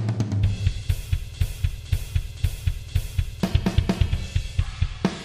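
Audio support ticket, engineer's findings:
Broken-record loop, 1.34 to 3.43 s. Same 0.51 s fragment repeats exactly, back to back, four times. Likely a stalled player, encoder or stream re-sending its last held buffer instead of new data. Content that should have played across those two seconds is lost, not delayed. Playback resumes at 3.43 s.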